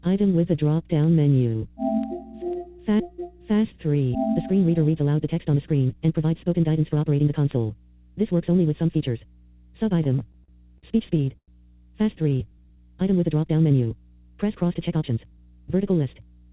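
The audio comes through a G.711 mu-law call path with nothing above 4 kHz. Under it a steady low 60 Hz mains hum sits about 30 dB below the signal, picked up from a ground loop or nearby transformer. From 0.54 s to the end, sharp ticks of uneven strength recur roughly every half second. These are word clock ticks: a digital link read by an unlocked clock, drifting around 40 ppm, slips one sample each time. Between 10.04 and 11.50 s the sound drags and stutters through ten brief holds, the longest 102 ms, totalling 278 ms. This is repeated stalls (stutter), where an empty jitter buffer keeps extending the last sound while nothing is lost. From 12.22 to 12.77 s the audio runs at 89% speed with unchanged pitch, adding 68 ms. This jitter buffer slow-down comes from repeated pitch periods rebuilding the reserve. From 14.74 to 15.38 s it hurries along at 114% speed, a jitter buffer speed-up that trims about 100 ms of short pitch-period pieces to cut excess delay.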